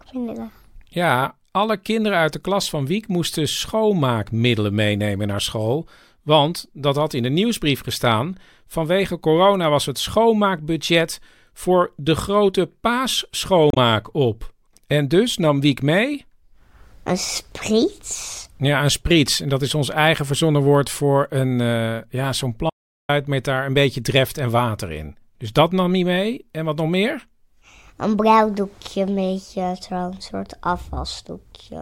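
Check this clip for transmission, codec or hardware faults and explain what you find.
Two faults stand out in this speech clip, one from the codec stream and one from the input path.

Damaged data in a compressed stream appears from 13.70 to 13.77 s. Corrupted bytes make the decoder misread frames and lose sync until it finds the next valid frame header, so the speech is briefly disturbed for about 65 ms.

An audio dropout to silence runs from 22.70 to 23.09 s. The speech cuts off abruptly into silence, with no room tone, and about 391 ms of it is lost. This is likely a lost input, such as a disconnected device or a failed link, while the recorder kept writing silence.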